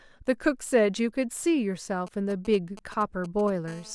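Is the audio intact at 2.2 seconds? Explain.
No. GSM signalling bursts run from 2.07 to 3.50 s: a nearby 2G phone exchanging control traffic emits short radio bursts that the audio circuitry rectifies, producing a galloping dit-dit-dit of brief 217 Hz buzzes roughly 20 dB below the speech.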